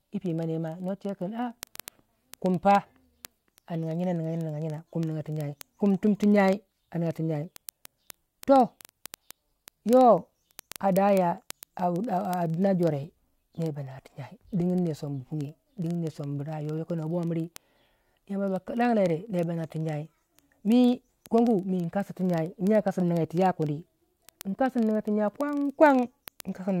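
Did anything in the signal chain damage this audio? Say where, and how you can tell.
Yes, at the converter stage, where the digital input meets the receiving clock. Word clock ticks run through the speech from 0.14 s to 26.78 s, sharp clicks at a steady rate of roughly one every 40 ms. That adds up to several hundred, with uneven strength from tick to tick. The receiver is free-running rather than locked to the sender, so each clock slip drops or repeats a single sample. The tick rate points to a clock mismatch of around 500 ppm.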